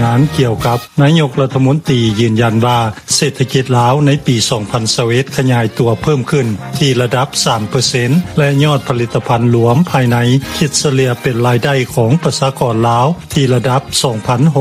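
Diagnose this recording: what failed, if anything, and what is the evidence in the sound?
The input gain was most likely set far too hot at the analogue stage, with a fast limiter or compressor downstream clamping the level on every peak. The result is gain pumping throughout, with the gain swinging by around 10 dB. Quiet and loud passages sit unnaturally close in level, giving the whole recording a squashed, breathing quality.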